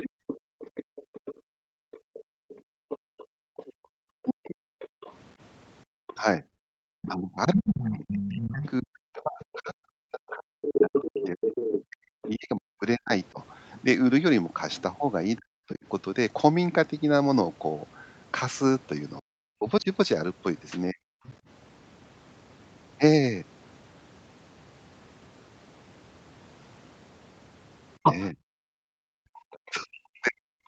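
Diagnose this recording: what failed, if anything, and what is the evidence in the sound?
A second voice runs under the talker from 0.0 to 12.28 s, roughly 10 dB down. It returns as a faint scrap at 21.26–21.34 s, and at 28.03–29.71 s it is about as loud as the talker. This is the other side's voice leaking through. Its likely cause is the call processing stage: the echo canceller failed to remove loudspeaker pickup.

The talker's voice sinks and breaks up at 0.02–0.22 s, across 4.14–15.84 s, at 19.19–21.01 s, and from 28.0 s to the end. The deepest dips approach 40 dB. This is speech suppressed in double talk. The echo canceller most likely confused near speech with echo and attenuated both.

The room sound drops away in bursts across 0.5–6.85 s, about three seconds in total, by about 37 dB. It dips again at 28.92–29.43 s by about 36 dB. This is background gated by the echo canceller, clamping the microphone while the loudspeaker played.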